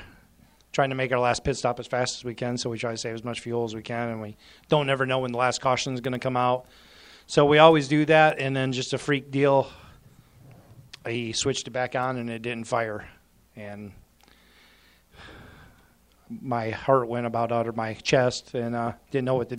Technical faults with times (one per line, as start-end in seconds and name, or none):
none